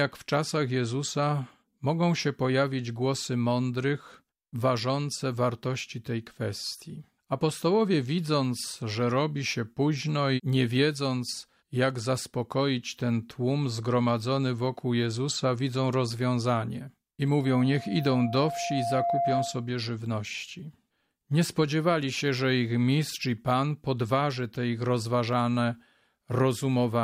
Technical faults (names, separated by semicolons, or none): loudspeaker feedback squeal